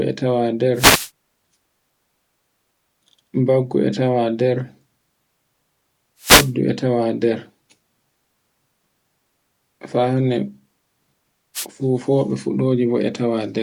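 Short swishes of static break through the speech at 0.74 to 1.10 s, 6.19 to 6.52 s and 11.54 to 11.66 s. These are wireless microphone noise hits: the FM radio link fades as reflected signals cancel, letting receiver hiss surge up briefly.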